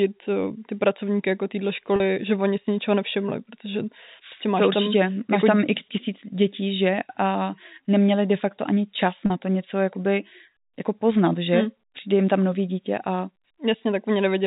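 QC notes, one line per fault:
1.96–2.00 s and 9.26–9.30 s, packet loss with pitch repetition: both times the sound hangs briefly on a slightly held, buzzy tone, first between "ty pracovníky jako téhle" and "že oni si ničeho", then between "de facto ani čas" and "to něco jakoby jako". About 40 ms of audio went missing each time, which fits two 20 ms packets. The receiver filled each hole by looping the last pitch cycle, and the gap is short enough that no fade to silence is heard. The G.711 A-law telephone band passes nothing above 4 kHz.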